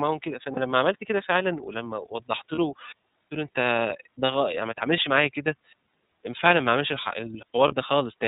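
The whole recording passes through the iLBC codec, a narrowband speech coder. Energy stops at 4 kHz, so a spectrogram shows a flat ceiling with nothing above it. The coding damage is plainly audible: the voice comes across rough and slightly synthetic. The coder rebuilds each 30 ms block independently from a modelled excitation, which fits the 13.33 kbps mode.

Lost iLBC frames cause four brief dropouts, at 0.54, 2.55, 4.25 and 7.68 s. Each lasts about 0.04 to 0.05 s, roughly one 30 ms frame. At each gap the decoder filled the missing stretch by repeating the last pitch cycle blended with noise. It sounds like a tiny held, buzzy or breathy vowel. A spectrogram shows a short patch of smeared, repeated harmonics, and the waveform shows near-identical cycles. Because every frame decodes on its own, the speech snaps back straight after each one.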